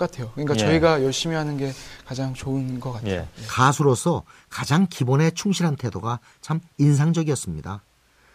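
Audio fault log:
No technical faults can be heard anywhere in the speech; level, continuity and frequency balance stay steady across the whole recording.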